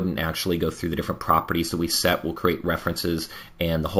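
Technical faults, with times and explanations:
Throughout, imaging from sample-and-hold upsampling: samples were repeated without smoothing, which fits a 16 kHz rate raised to 48 kHz, so a mirrored spectrum copy fills 8 kHz to 16 kHz about 16 dB down, a metallic fizz following the level and moving against pitch.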